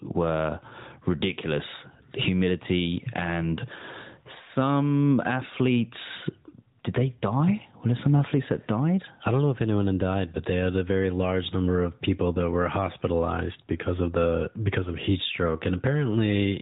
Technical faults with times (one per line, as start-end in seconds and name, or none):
0.00-16.61 gain pumping